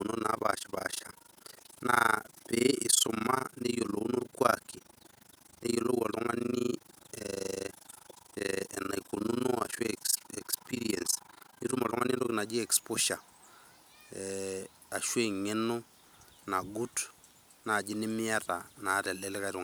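From 0.0 to 12.34 s, overlap-add ripple causes a fast flutter near 30 Hz. Uneven frame overlap dips the speech level by about 60 dB each frame.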